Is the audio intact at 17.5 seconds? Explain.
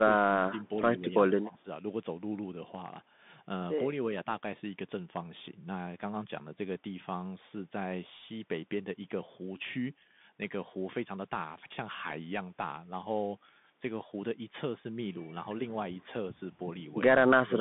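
No. Two faults affect that moment. The echo canceller most likely could not tell the near talker from loudspeaker echo while both sides spoke at once, and it pulled the talker down. This is speech suppressed in double talk, from 17.45 to 17.58 s. The voice sinks sharply, by roughly 25 dB at its deepest, for around 150 ms, so the speech there thins and drops nearly out instead of running on at steady level.

Underneath that, the whole clip passes through a Bluetooth CVSD headset codec. The sound points to a 64 kbps CVSD link, which tracks the waveform one bit at a time with an adapting step and cannot follow fast, loud high-frequency movement. The line band runs from about 150 Hz to 3.6 kHz, with nothing above 3.8 kHz. The speech at 17.5 s is narrow and boxy, sibilants turn scratchy, and a granular hiss sits under the voice. The codec damage is plainly audible.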